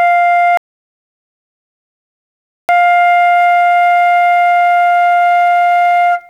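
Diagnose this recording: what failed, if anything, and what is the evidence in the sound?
Audio dropout to silence from 0.57 to 2.69 s: the music stops mid-flow and about 2.1 s is lost to silence, with no residual noise floor. The likely cause is a lost input upstream, such as a disconnected device or link, while the recorder kept writing zeros.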